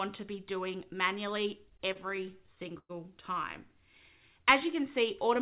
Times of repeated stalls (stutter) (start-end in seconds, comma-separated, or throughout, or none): 1.70-2.91